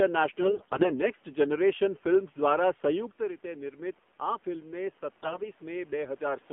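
A mobile link carrying this speech runs it through the AMR narrowband mobile codec for the whole clip. The line is limited to about 200 Hz to 3.4 kHz, and the coding sounds like a low AMR-NB mode near 7.4 kbps. The codec rebuilds the voice from a vocal-tract model and a few excitation pulses per frame, so the voice comes out thin, buzzy and plainly synthetic, and the room noise behind it turns into a swirling warble. The level change around 3 s sounds like the talker shifting position and is not a system fault. On two stretches, AMR bit errors corrupt the less protected bits of the frames while the important bits still check out. The first runs from 0.42 to 0.95 s, with roughly one bit in ten flipped, and nearly every frame there is hit. The second runs from 5.23 to 5.45 s with somewhat lighter damage. With the excitation pulses misplaced and the fine gain and spectral values wrong, the voice keeps its rough pitch and loudness but turns hoarse, scratchy and gargly in those stretches.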